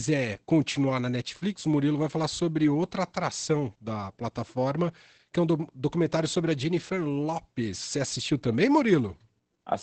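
Opus voice compression runs through the whole clip. Nothing sounds above 8.6 kHz, so the speech is limited to wideband. The linear-prediction coder renders the excitation coarsely. Speech comes out muffled, hoarse and faintly robotic. The damage is plainly audible and fits a bitrate near 12 kbps.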